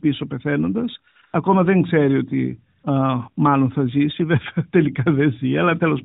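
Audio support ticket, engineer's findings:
AMR comfort noise at 1.12–1.16 s, 1.22–1.24 s, 1.26–1.34 s (before "δεν ξέρει ότι") and 2.80–2.84 s (between "δεν ξέρει ότι" and "μάλλον θα ζήσει"). Real background replaced by smooth synthetic hiss for 20–80 ms gaps. The phone's silence detection stopped speech frames, and the receiver filled each pause with generated noise. Band-limited AMR-NB coding audible throughout, fitting the 12.2 kbps mode.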